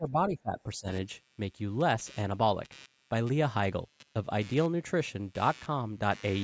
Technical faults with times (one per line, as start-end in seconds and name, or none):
0.00-6.43 computer activity noise
0.00-0.87 speech suppressed in double talk